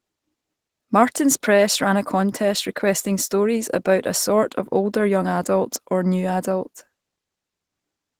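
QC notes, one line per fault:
Throughout, Opus voice compression. The speech sounds hoarse and slightly robotic. The full band is kept, which fits the hybrid mode: a linear-prediction coder below 8 kHz and a transform layer above. The coarse excitation coding points to about 16 kbps.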